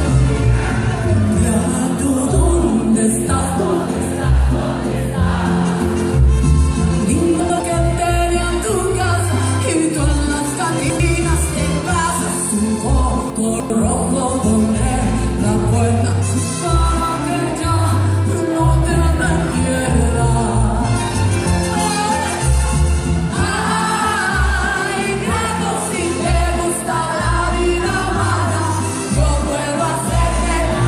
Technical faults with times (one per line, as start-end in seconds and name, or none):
7.40-7.60 chunks out of order
10.80-11.00 chunks out of order
13.30-13.70 chunks out of order